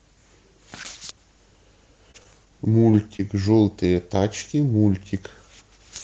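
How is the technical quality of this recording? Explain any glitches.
Three brief network glitches mark this speech recording, which went through a WebRTC call path whose coded sound is band-limited, consistent with Opus at about 24 kbps with an 8 kHz bandwidth.

Short concealed packet loss, 2.11 to 2.16 s and 3.17 to 3.21 s: about 20 ms of audio never arrived, so the decoder extended the preceding sound, leaving a brief smear or wobble.

Short stall from a late packet, 2.91 to 2.95 s: the jitter buffer ran dry, so the receiver stretched the last sound about 18 ms, briefly holding it with a slight buzz or dip.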